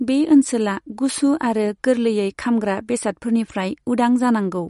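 From start to finish the speech carries plainly audible MP3 compression artefacts. Nothing is left above 11.2 kHz, so the top end sounds dull and clipped. Short of bits, the encoder has likely dropped weak frequency lines, which flicker in and out between frames. That gives the speech a watery, swirling texture. The s sounds turn metallic, and sharp onsets blur. The damage points to a low bitrate, near 48 kbps.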